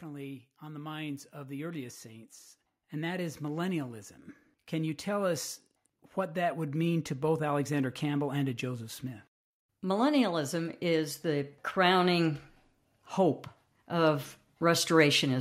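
From 0.05 to 2.38 s, automatic gain rising lifts the level by about 5 dB before "and that is millennialism". After "you tell us", it climbs again, about 13 dB, from 6.14 to 12.36 s. The control judged the input too quiet. Speech and background swell together.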